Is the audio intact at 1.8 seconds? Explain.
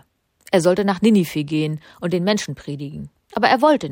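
Yes, at 1.8 seconds the speech plays through intact, with no dropout, click or other fault at that point.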